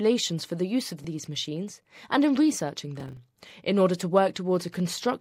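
At 3.00 s there's a short burst of processor overload crackle running to about 3.17 s. Whatever was producing the audio couldn't keep up, and it blew through a run of buffer deadlines, around seven over that stretch. With buffers of roughly 10 ms each, every miss replayed a scrap of old audio with hard edges, so you get that gritty, tearing texture riding on the sound until the load eases off.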